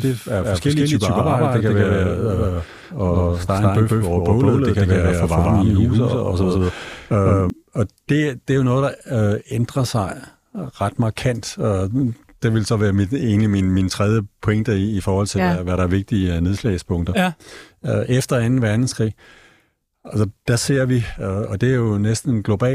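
From the very start of the clip to 7.5 s, the speech carries a doubled audio track. A second, full-band copy trails the original by roughly 150 ms. It sits at about the same level. The copy has no decay or room colour, so it sounds like a crisp slap rather than reverb. The likely cause is the signal being captured twice, once through a slower path. The doubling cuts off abruptly at 7.5 s, just before "og det det er".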